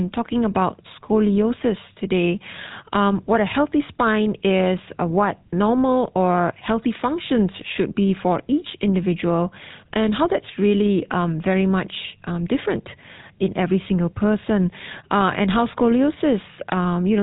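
From start to finish this speech runs through the GSM full-rate codec, and the damage is plainly audible. The codec rebuilds the voice from a vocal-tract model fed with regularly spaced pulses, so it comes out buzzy and gravelly, with a roughness that sits under every syllable. The bandwidth stops around 3.8 kHz, which dulls the sibilants and takes the air off the top. The thin, rasping quality fits the old 13 kbps GSM rate.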